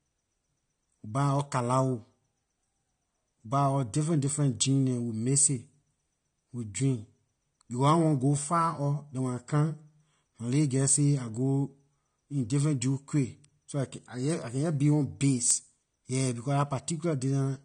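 Low-bitrate AAC compression, likely AAC-LC at around 32 kbps, starves the encoder of bits, so it discards everything above 9.7 kHz and coarsely quantises the rest. The speech sounds dull and smeared throughout, with an audible warbling, fizzy edge on sibilants.

From 0.11 s to 17.63 s, clock slip clicks arise because two devices run unsynchronised, with a clock error of a few hundred parts per million, likely the cause of one sample being dropped or repeated about fourteen times a second. Some three hundred faint, regular ticks merge into a soft rattle under the speech.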